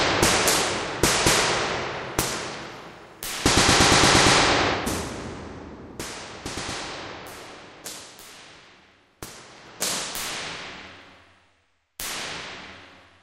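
No technical faults are audible.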